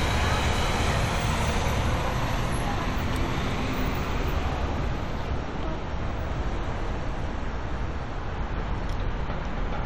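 No technical faults can be heard anywhere in this audio.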